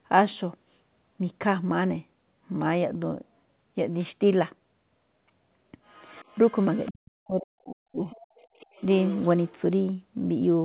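From 5.85 to 6.92 s a faint second voice, roughly 30 dB under the talker, sits behind the speech. It is likely the other side's voice leaking through an incompletely cancelled loudspeaker path. From 6.9 to 8.04 s the talker's own speech sinks, by as much as 40 dB, for about a second in pieces. This is likely speech suppressed in double talk: the echo canceller turns the talker down rather than letting another voice in. The leak returns at 8.1 to 8.85 s at the same faint level, then at 9.02 to 9.52 s much louder, about 15 dB down, all within the narrow telephone band that stops at 4 kHz.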